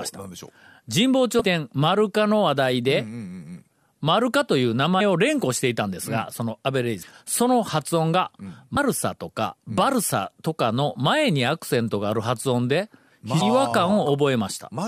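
Damaged data in a compressed stream produces brief blips in the speech at 1.40–1.42 s, 4.99 s, 7.01–7.03 s, 8.76 s and 13.40 s, where corrupted frames throw the decoder out of sync.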